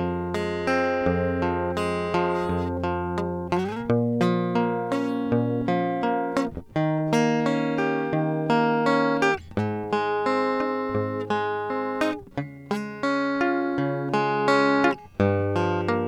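No technical faults detected anywhere in the music.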